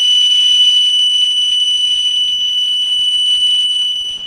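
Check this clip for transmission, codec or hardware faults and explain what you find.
One codec fault runs through the whole clip. The music sounds muffled, hoarse and grainy throughout, likely Opus compression forced into its speech-oriented hybrid mode at a rate that fits 16 kbps.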